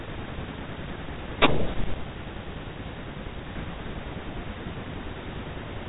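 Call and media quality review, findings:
Speech arrives as a standard narrowband telephone signal consistent with G.711 A-law coding at 64 kbps. The band stops at about 3.8 kHz, and the coding leaves only faint quantisation noise that tracks the level of the speech.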